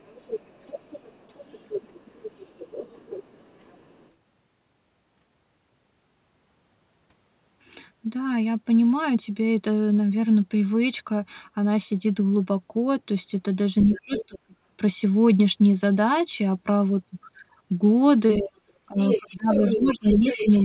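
From the start to 4.09 s, a second, fainter voice sits underneath the talker, roughly 20 dB down. This is the other side's voice leaking through, most likely because the far end's loudspeaker output reached the microphone and the echo canceller left some of it behind. It returns louder from 13.81 to 14.39 s, about 15 dB below the talker, and again from 18.96 s to the end, at only about 10 dB down.

Between 13.87 and 14.56 s the talker's voice is pushed down in pieces, about 0.4 s in total, dipping by as much as roughly 30 dB. This is speech suppressed in double talk: with both sides speaking together, the canceller likely could not separate the near voice from the echo and attenuated both. It happens again from 18.38 s to the end, with dips of around 25 dB. Throughout, nothing is heard above 4 kHz, which points to a narrowband call codec such as G.711 mu-law on the call path.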